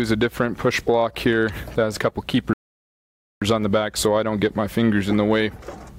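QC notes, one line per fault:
2.53 to 3.42 s, rebuffering stall: playback runs dry and falls silent for about 0.88 s, then picks up exactly where it left off. The player exhausted its downloaded audio and waited for more, so nothing is skipped, but the gap stretches the clip's running time.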